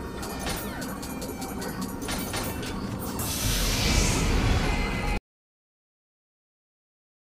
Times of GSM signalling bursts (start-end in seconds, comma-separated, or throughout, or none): none